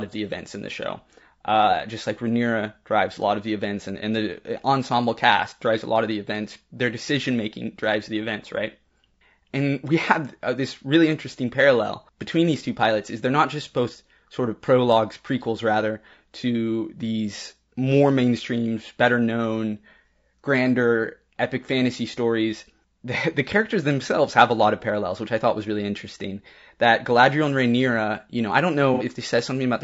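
Throughout the recording the speech sounds rough and grainy, with noise filling the gaps between harmonics and a thin, synthetic-sounding top band. This is most likely low-delay AAC compression: AAC-ELD's short frames resolve pitch poorly, and the damage is plainly audible, which fits a bitrate of around 32 kbps.

From 28.94 to 29.03 s, right after "you know I don't", there is a brief smeared, noisy patch. This is AAC frame loss with concealment. The decoder patched the missing frames from the last good spectrum, and the gap sounds about 60 ms long, which fits two lost frames.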